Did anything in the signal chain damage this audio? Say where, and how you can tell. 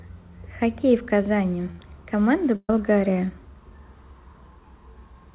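Yes, a burst of packet loss at the network stage, at 1.71 s (70 ms) and 2.56 s (about 130 ms). Concealment holds the last sound and fades it, to silence for 40 ms in the second. Audio then resumes further on, unlike a hard dropout's abrupt gap.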